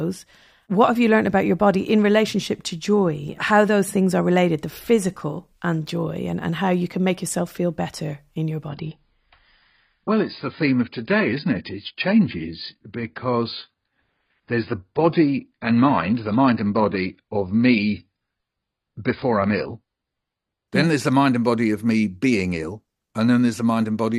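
Adaptive stream at a lower bitrate from 8.68 s to 20.68 s in this speech clip: right after "feel better in your", the quality drops abruptly with no gap, as the player switches to a lower-bitrate version of the stream, presumably because the connection slowed. For those twelve seconds nothing remains above about 5.1 kHz, so the treble vanishes and codec artefacts grow, which fits a step down from roughly 96 kbit/s AAC to around 16 kbit/s before the higher-quality version returns.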